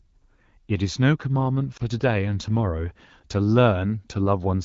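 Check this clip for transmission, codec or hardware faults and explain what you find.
One transmission fault stands out: a single lost AMR speech frame between 1.77 and 1.82 s, heard as a short, soft dip in the speech. The surrounding audio has the bandwidth and light coding texture of AMR wideband (HD Voice), which fits a rate around 12.65 kbit/s.

At 1.77 s a radio error corrupted one 20 ms frame so that it failed its checksum. The decoder concealed it by repeating the previous frame's pitch and vocal tract settings at reduced gain, so the sound briefly warbles and sags, then recovers once the next good frame arrives. A packet dropout in a codec without concealment sounds different. It leaves a hard gap or click, while this one is a smoothed, model-shaped dip.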